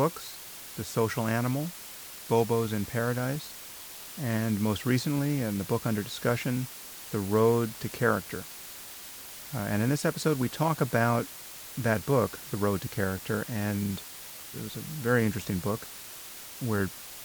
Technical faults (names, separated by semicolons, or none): low bit depth with dither